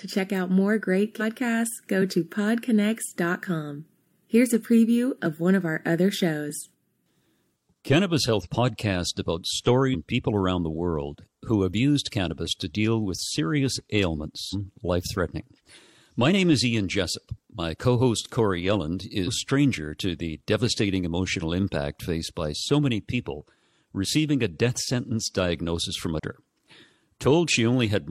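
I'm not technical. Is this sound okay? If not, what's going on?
No. Compressed frames are skipped at 1.16 to 1.22 s, 8.41 to 8.48 s, 9.90 to 9.96 s and 14.49 to 14.54 s. The file stores the speech in small chunks of 46.4 ms each, and at these points a run of chunks was missing or rejected as damaged, so playback jumps ahead. Roughly half a second of speech vanishes at the first spot, about 0.7 s at the second, about 0.2 s at the third and about a second at the last. Each jump is heard as a sudden break in the speech.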